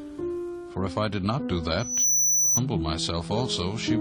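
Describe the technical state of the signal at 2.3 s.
A piercing, steady whistle at 6 kHz sits on top of the audio at 2.3 s, swelling over roughly a third of a second after it starts at 1.79 s and persisting until 2.61 s, ending up around 5 dB louder than the sound beneath it. This is loudspeaker feedback squeal: the microphone is picking up the loudspeaker it feeds, and at 6 kHz the loop gain exceeds one, so that tone keeps reinforcing itself until the loop is broken.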